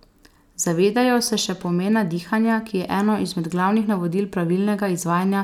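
Nothing in the speech stood out as a technical fault on listening.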